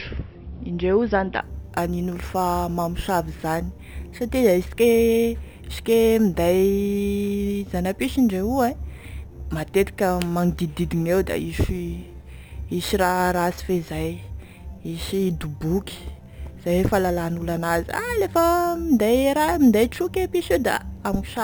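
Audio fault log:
1.42–21.44 s, imaging from sample-and-hold upsampling: just after "zany da", a metallic fizz appears in the 6–12 kHz band, about 21 dB below the speech. Its mirrored tones fall as pitch rises, which fits samples held unfiltered from a 12 kHz source.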